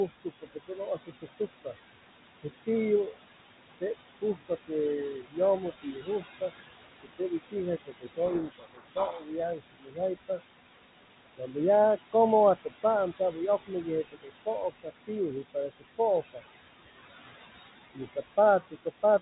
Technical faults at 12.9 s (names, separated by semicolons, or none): noise suppressor artifacts; speech cut by the noise suppressor